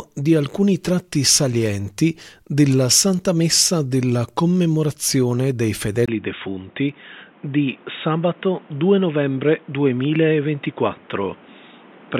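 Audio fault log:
6.06–12.19 s, input switched to a poorer device: after a 20 ms gap, sound turns dull and cuts off above 3.8 kHz, drops about 5 dB, and gains new background noise around 30 dB down, likely from a narrower-band input taking over.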